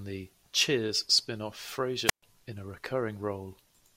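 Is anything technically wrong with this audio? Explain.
Yes. At 2.05 to 2.23 s there is a wireless microphone squelch dropout. The radio link from the microphone weakens, hiss rises briefly, then the receiver's squelch mutes the output for about 129 ms. The speech returns at "in a".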